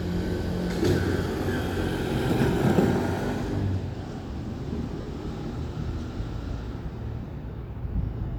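A recording of sounds. At 5.01 to 5.06 s, lost LE Audio frames leave a 50 ms noisy smear. The LC3 decoder refilled the gap, which fits five 10 ms frames.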